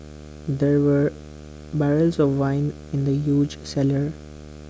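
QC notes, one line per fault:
Throughout, video or display buzz: a screen or video cable is coupling its 75 Hz field-rate signal into the audio path, laying a steady buzz with harsh hash above it under the speech, roughly 20 dB below the speech level.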